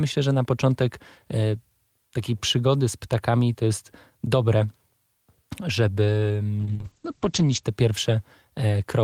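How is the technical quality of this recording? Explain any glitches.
Quality takes a clear hit near the end, with one glitch worth flagging. From about 6.63 to 7.69 s there's a call bitrate drop: the connection's bandwidth estimate sagged and the encoder went from roughly 40 kbps down to 9 kbps, sitting at the bottom for about a second. At that rate it codes much more coarsely and trims the top end, so the speech loses everything above 8 kHz instead of reaching 20 kHz. You hear it go muffled and a bit rough and watery until the bits come back.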